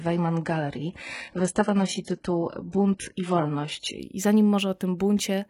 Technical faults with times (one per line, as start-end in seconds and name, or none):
0.00-4.00 adaptive stream starting at a low bitrate